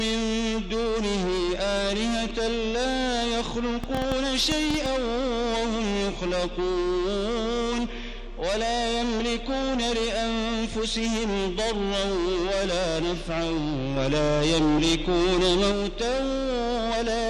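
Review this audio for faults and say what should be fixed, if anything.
A train of clicks runs from 3.84 to 4.87 s, likely from nearby equipment or a faulty connection or power supply injecting short pulses. Around ten similar clicks arrive unevenly at about 7.8 per second, peaking roughly 10 dB above the sound. Shielding cables and checking the interface should prevent it.

A sudden gain jump, likely a digital gain change applied without a ramp, raises the level by about 4 dB at 13.96 s and holds until 15.72 s, with sound and background noise stepping together. Ramping every gain change over a few milliseconds prevents this.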